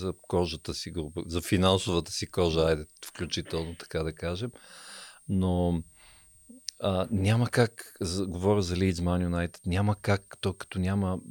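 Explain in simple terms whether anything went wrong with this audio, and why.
Something did go wrong: a faint, high whistle runs under the speech the whole way through, sitting around 8.5 to 8.8 kHz and wandering a little in pitch. That's switching supply whistle, where a switching power supply's circuitry hums at an audible rate and leaks into the recording.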